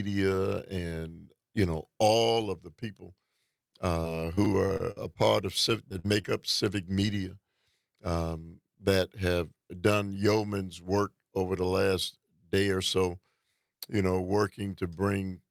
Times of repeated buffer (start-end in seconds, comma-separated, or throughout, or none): 0.35-0.37, 4.45-4.47, 6.43